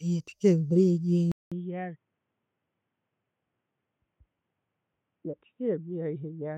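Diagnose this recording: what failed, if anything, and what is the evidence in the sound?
Input switched to a poorer device at 1.32 s, lasting to the end. After a 0.2 s gap, the speech turns dull and boxy, with nothing above 3.8 kHz, is roughly 10 dB quieter and sits over faint new background noise. At the driver stage, capture likely moved to a narrower-band microphone or headset profile.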